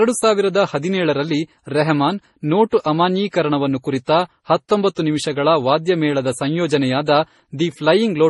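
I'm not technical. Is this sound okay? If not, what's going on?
No. The speech sounds smeared and watery all the way through, and nothing above about 11.3 kHz survives, so it lacks sparkle. This is likely transcoding between lossy codecs: compressed as MP3, then recompressed twice, each pass adding its own damage.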